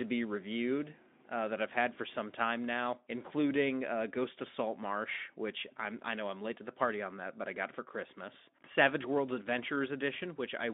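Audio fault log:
Nothing here counts as a fault: the speech comes over a Speex-coded phone-style line that's working as it should, with the narrow band of roughly 200 Hz to 3.6 kHz and the light coding texture you'd expect from that kind of link.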